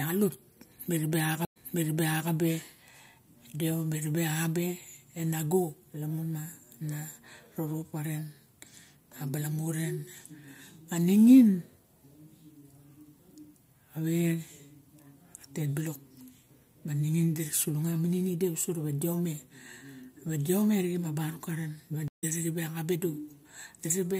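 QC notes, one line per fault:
1.45–2.30 s and 22.08–22.24 s, stream reconnect: the connection dropped and the player restarted with a fresh decoder mid-stream. At 1.45 s the speech cuts to about 108 ms of silence, then resumes roughly 0.75 s earlier, so a stretch is heard twice, which fits the server resending a burst. At 22.08 s there is about 148 ms of silence, after which the speech picks up about a tenth of a second later, skipping material as a live stream does.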